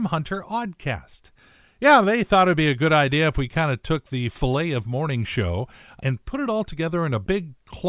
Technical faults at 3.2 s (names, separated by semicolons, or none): none